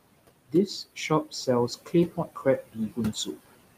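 Noise suppressor artifacts run through the whole clip: the processor pulls the steady room noise, which sits about 13 dB under the speech, down by about 21 dB in the gaps.

Speech cut by the noise suppressor appears three times, each deeper than the last: 0.96 to 1.48 s with a drop of about 11 dB, 1.86 to 2.46 s at about 14 dB, and 2.62 to 3.49 s at about 18 dB. The suppressor mistook quieter speech energy for noise, so brief stretches totalling roughly a tenth, two tenths and three tenths of a second sound swallowed and faint.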